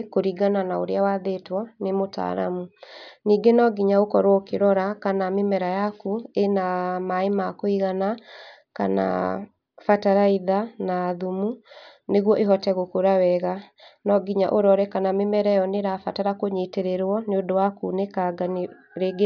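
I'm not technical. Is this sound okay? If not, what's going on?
Yes, nothing wrong can be heard in this recording: no dropouts, glitches or distortion anywhere.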